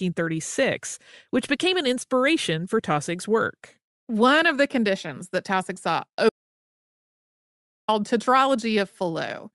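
From the first moment the speech carries the breathy, grainy edge of Bluetooth LC3 compression. The codec has likely discarded much of the upper spectrum in short frames and filled it back with shaped noise. On a spectrogram the high band looks patchy and noise-like rather than harmonic. The plainly audible damage fits a mid-range setting around 48 kbps with 7.5 ms frames.

At 6.29 s an audio dropout to silence cuts the speech off mid-flow, and it does not return until 7.88 s, leaving a gap of about 1.59 s. The input was likely lost for that stretch while recording carried on writing silence. No room tone remains in the gap. The waveform shows a flat line with abrupt edges, and the spectrogram shows a dark vertical band.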